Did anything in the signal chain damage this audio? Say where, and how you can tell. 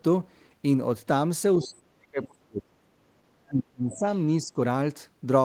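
Yes, in the call processing stage. The speech suppressed in double talk is likely the echo canceller turning down the talker along with the echo while both sides spoke: the sound drops by roughly 40 dB from 1.59 to 3.13 s, roughly 30 dB from 3.46 to 4.04 s, and roughly 10 dB from 4.41 to 4.58 s.

The other side's voice is also leaking through, likely because echo cancellation left some loudspeaker sound in the microphone signal. Short scraps of a second voice appear from 1.63 to 1.67 s and 2.23 to 2.27 s at about 20 dB below the speech, and from 4.10 to 4.15 s at about 35 dB below.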